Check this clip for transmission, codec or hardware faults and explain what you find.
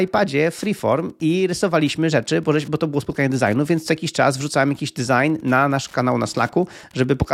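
There's one hardware fault, running through the whole speech clip: Wi-Fi interference. A nearby Wi-Fi radio's beacon, repeating every 102.4 ms, is being rectified by the audio circuit, so you get a steady ticking about ten times a second, sitting well below the speech.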